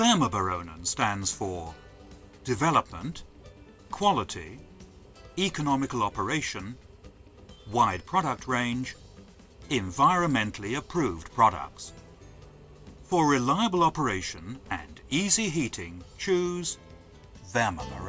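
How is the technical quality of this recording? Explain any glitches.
The technical quality of this recording is sound, with no glitches to explain.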